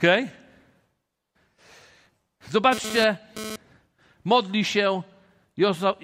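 A speech recording with two separate faults. From 1.99 to 2.45 s there is processor overload crackle: the system misses dozens of deadlines for buffers of roughly 5 ms, and each late slot is filled with a repeat of old audio, leaving hard-edged seams that sound like gritty tearing. On a waveform this shows as a run of abrupt discontinuities, and on a spectrogram as a dense cluster of thin vertical broadband streaks. From 2.72 to 3.56 s a GSM phone buzz appears, a raspy tone at 217 Hz about 10 dB below the speech. It comes from a nearby phone transferring data, whose pulsed radio bursts the audio circuitry rectifies. A spectrogram shows it as a comb of evenly spaced horizontal harmonic lines at multiples of 217 Hz that start and stop abruptly, and the waveform shows a regular pulse train riding on the signal.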